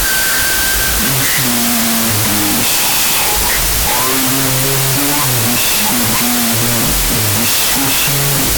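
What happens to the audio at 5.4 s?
At 5.4 s you're hearing the wrong sample width fault that runs through the whole clip. It fits 32-bit float speech being read as 16-bit integers: bytes get mismatched, so loud noise swamps the buried speech, which also plays at half speed and an octave low.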